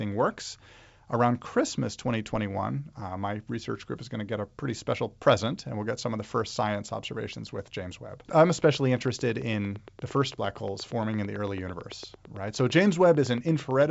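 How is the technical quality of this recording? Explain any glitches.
The main problem is a train of clicks over the last five seconds of this speech. From 8.64 s to 13.83 s there's a regular ticking at about 8.9 clicks per second, roughly fifty in all. The clicks peak about 5 dB above the speech, so they poke through the talking and the gaps alike. The steady pace and near-identical pulses most likely point to interference from nearby equipment or a faulty connection or power supply. The G.722 wideband coding is clean at 64 kbit/s, with only faint coding traces.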